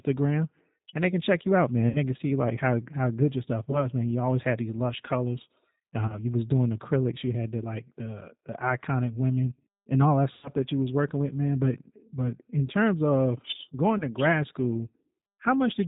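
Speech that sounds band-limited, slightly rough and synthetic, with nothing above 4 kHz, the sound of the G.729 codec, consistent with its 8 kbit/s rate. Brief buzzy or noisy, fading smears at 1.89–2.00 s, 3.71–3.86 s, 6.07–6.20 s, 10.33–10.53 s and 13.98–14.04 s are VoIP packet loss concealed by the speech codec. The decoder stretched its last pitch and filter over gaps of 60, 20, 20, 100 and 20 ms, and the sound stays weak briefly after each.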